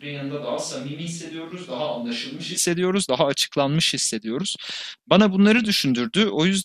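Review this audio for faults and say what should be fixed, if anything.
From the start to 2.56 s the speech is roomy, hollow and thin in the bass, roughly 10 dB quieter, with room noise around 35 dB below it. This is a switch to a distant microphone, likely because the close mic dropped out. The waveform jumps up abruptly at 2.56 s, and before that the spectrogram shows weak lows and smeared reverberant tails. Monitor the close mic during recording and keep a backup recorder running on it.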